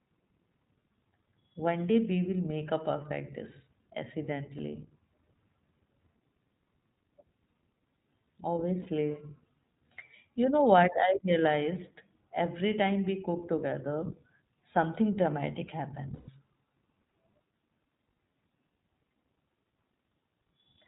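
The whole speech clip carries the iLBC codec. Nothing above 4 kHz survives, and the damage is plainly audible as a rough, synthetic edge, which fits the 15.2 kbps mode.

Lost iLBC frames cause three short gaps. These occur at 4.58 to 4.61 s, 8.82 to 8.87 s, and 16.14 to 16.30 s. Each time, the decoder repeats the last pitch cycle mixed with noise, heard as a held, buzzy vowel. The speech then recovers almost at once. The 140 ms gap is longest.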